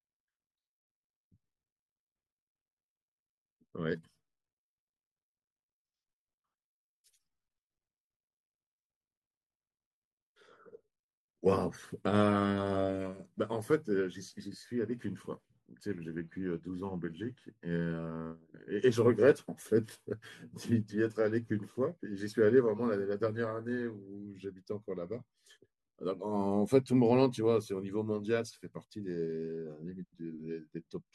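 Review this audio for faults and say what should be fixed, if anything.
Nothing in the signal needs fixing: the speech holds a steady level and continuous playback throughout, with no audible problem in the recording or transmission chain.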